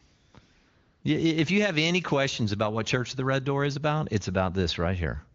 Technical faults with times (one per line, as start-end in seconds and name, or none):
0.05-1.03 AMR comfort noise